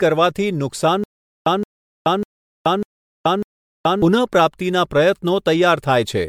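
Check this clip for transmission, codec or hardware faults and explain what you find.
Two faults are audible: generation loss across the whole speech clip, and a stutter with silent gaps in the middle.

Generation loss runs from start to finish. It sounds swirly, smeared and hollow, and consonant attacks blur. The likely cause is repeated MP3 encoding, about four passes at around 96 kbit/s. Each pass quantises on a shifted frame grid, so noise and spectral holes build up.

The stutter with silent gaps runs from 1.04 s to 4.02 s. A 170 ms fragment repeats five times, once every 597 ms, with 427 ms of digital silence after each. The likely cause is a stalled stream replaying its last buffer at each retry, and the audio meant for that span is lost.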